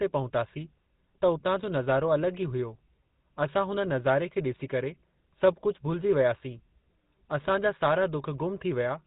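Speech heard through a GSM full-rate codec throughout: its plainly audible buzzy, gravelly texture, unlike clean band-limiting, comes from pulse-coded excitation, with nothing above 3.9 kHz, fitting 13 kbps.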